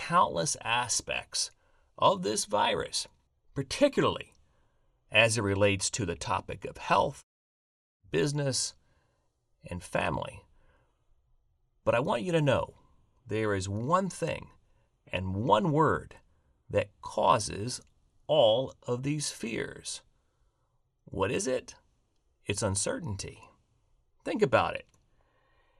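No technical faults can be heard in this speech recording. Nothing in the audio points to a problem anywhere along the way.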